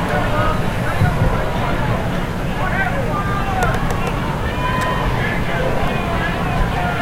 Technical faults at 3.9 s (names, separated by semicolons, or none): overlapping chunks